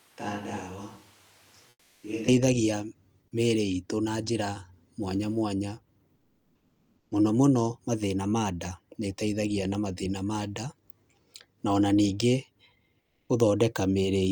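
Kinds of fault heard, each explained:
Switch to a distant microphone: From the very start until 2.28 s the voice sounds roomy and hollow, with thin bass, a level about 10 dB lower than the rest, and room noise only about 25 dB below the speech. The close microphone's signal was likely missing for this stretch, so a microphone further away carried the sound, and the voice snaps back to a close, full tone at 2.28 s.
Comfort noise in place of the background: In three pauses the real background gives way to a flat, featureless hiss that is about 4 to 6 dB quieter. This happens at 1.69–2.03 s, at 6.15–7.11 s between "njĩra mwanya mwanya" and "mũno mũno mathĩna ma", and at 13.01–13.29 s. The sender likely stopped transmitting during these gaps in the speech, and the receiver filled them with synthetic noise, which fits Opus discontinuous transmission.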